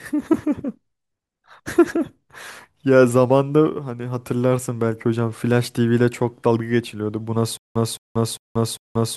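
At 7.57 s the speech breaks into a stutter with silent gaps that continues to the end of the clip. A fragment of about 216 ms plays, then about 183 ms of digital silence follows, and the cycle repeats every 399 ms, four times in all. The likely cause is a stalled player or stream that replays its last buffered fragment on each retry and then runs empty, so the audio due in that stretch never arrives.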